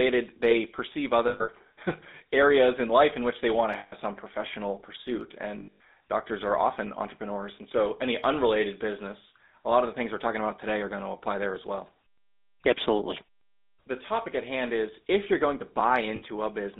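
Throughout, the speech carries GSM full-rate codec damage. The sound fits the 13 kbps full-rate coder, whose sparse pulse excitation gives a plain buzzy, gravelly roughness, and the line band is limited to 200 Hz–3.7 kHz. Lost GSM frames follow. At 1.28 s, about 180 ms of loss is scattered over 200 ms, with a run of roughly 100 ms. At 3.78 s, between "which they want to" and "some professional pursuit", 140 ms is lost. At 5.6 s, before "doctors are often entrepreneurs", 180 ms is lost, scattered like the first. At 16.16 s, after "if you're going to", 60 ms is lost. Each gap is filled by repeating the last good frame, heard as a rough metallic ring.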